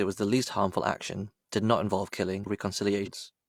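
A speech recording with two short bursts of damaged data in a compressed stream, at 2.42 to 2.47 s and again at 3.02 to 3.08 s, each lasting around 55 to 60 ms. Both are brief glitches cutting into the speech. Corrupted bytes in the encoded frames leave the decoder unable to read those frames properly. It loses frame sync and searches until it locks onto the next valid header.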